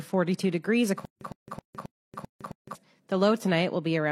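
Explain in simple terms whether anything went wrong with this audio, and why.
The player or stream likely stalled and retried, replaying its last fragment each time. From 1.05 to 2.75 s, this stutter with silent gaps repeats one 109 ms burst six times, each followed by 160 ms of dead silence, so that stretch of audio is lost.

Separately, the audio was encoded in pieces and joined without trimming the padding each encoding adds. This gap at a join of encoded pieces is a 122 ms silence from 1.93 to 2.05 s, fitting pieces about 2 s long, before the sound resumes where it stopped.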